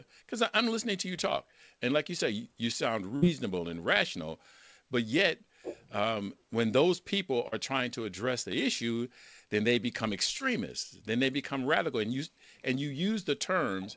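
At 3.16 to 3.24 s there is a burst of packet loss: about 60 ms of audio never arrived, and the receiver bridged it by extending the last sound while turning it down, so it comes across as a brief held buzz or fading hiss before the speech resumes with that stretch missing. On a spectrogram the gap shows as a patch of smeared or repeated harmonics that thins out, then an abrupt return to normal texture. On the waveform, the envelope decays smoothly across the gap.

Two shorter instances of short concealed packet loss follow, at 7.48 to 7.54 s, covering about 40 ms, and at 10.38 to 10.42 s, covering about 20 ms. Each time the decoder synthesised a stand-in from the preceding pitch or noise and cross-faded back into the real signal, which is heard as a momentary smear or wobble. The spectrogram shows a small blurred seam in the harmonic pattern, and the waveform a slight irregularity in period at each spot. 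Throughout, nothing appears above 8 kHz, a ceiling consistent with a wideband call codec such as G.722 at 64 kbps.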